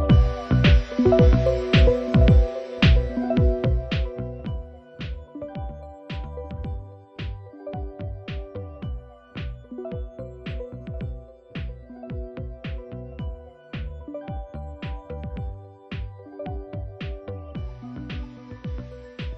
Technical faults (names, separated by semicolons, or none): zipper noise